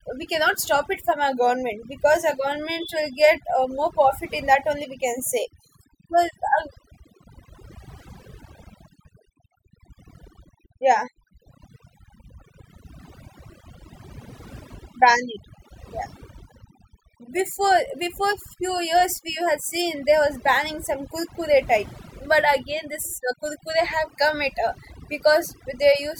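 From start to finish the speech carries overdone noise removal: a noise reducer pushed too hard, pulling individual frequency bands down or out whenever they sit close to its noise estimate. Pauses fall to near silence dotted with twinkling specks, and quieter components of the voice were cut along with the noise. Unlike a noise gate, which mutes everything at once, this thins the sound band by band.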